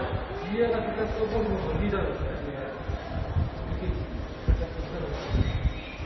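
Throughout, transcoding between lossy codecs: smeared, watery artefacts from successive encoders stack up, likely an MP3, Vorbis and WMA chain, leaving a spectrogram empty above about 5.9 kHz.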